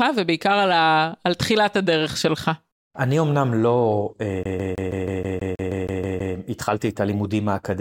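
From 4.43 to 6.35 s the speech locks into a CD stuck on one turn. The same 160 ms segment repeats 12 times at an even, rapid rate, with a brief mute at each jump. On the waveform it shows as identical blocks separated by thin gaps. On the spectrogram it is a regular comb of repeated patterns.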